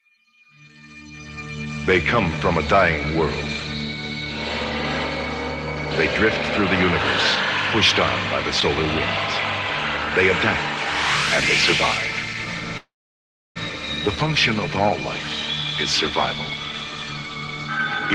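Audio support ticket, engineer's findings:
Call audio freeze, 12.77–13.58 s. Last sound smeared into a brief fading buzz, then about 0.68 s silence; audio resumes where it stopped, nothing lost, 782 ms delay added. Likely packets held in transit, jitter buffer underrun. Spectrogram: blurred tail, blank band, then clean resumption. Waveform: flatline gap.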